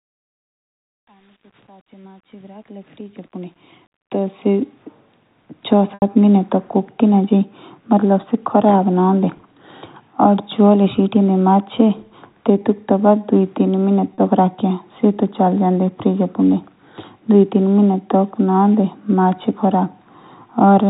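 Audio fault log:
0.00–4.83 s, truncation distortion on a fade: the fade-in from silence to 4.83 s passes through a stage keeping only about 9 bits with no dither, so the quiet opening collapses into coarse square steps. It is worst up to 3.66 s, where the speech sounds gritty.
5.94 s and 14.14 s, packet loss with pitch repetition: 80 ms of audio is lost at 5.94 s and 40 ms at 14.14 s. At each gap the receiver repeats the last pitch period as concealment; at 14.14 s this sounds like a briefly held, buzzy tone, while at 5.94 s it fades into silence and the speech returns with a short cross-fade. The sizes of the gaps point to about four and two lost packets respectively. The narrow G.711 telephone band, with nothing above 4 kHz, is audible throughout.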